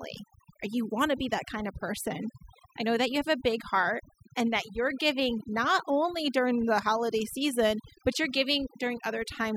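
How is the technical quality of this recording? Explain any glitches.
The recording has one glitch, present from start to finish: overdone noise removal. A noise reduction setting pushed too hard switches off frequency bands near the noise level, leaving near-silent, twinkling gaps and taking quiet parts of the voice with them.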